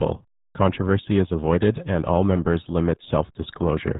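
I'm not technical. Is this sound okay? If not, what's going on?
No. RealAudio 14.4 codec runs throughout, 0 to 4 seconds. This old dial-up speech format squeezes heavily, removing everything above 3.8 kHz, so speech sounds muffled and gargly.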